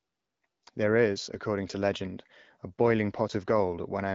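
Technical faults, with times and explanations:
Nothing stood out on listening to this speech.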